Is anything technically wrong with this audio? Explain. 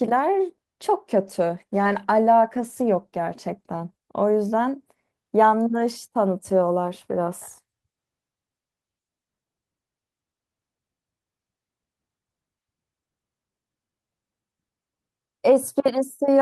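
Yes. From 1.22 to 3.93 s there is a call bitrate drop, sounding rough and watery for about 2.6 s, consistent with the encoder falling from around 32 to 18 kbps. Coarser coding smears fine detail. On a spectrogram, harmonics look blotchier until recovery.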